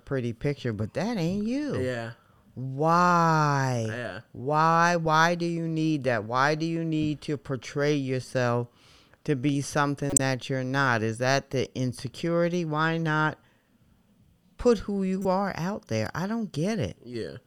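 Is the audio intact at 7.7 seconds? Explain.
Yes, at 7.7 seconds the speech carries straight through with no dropout, click, distortion or other fault to be heard.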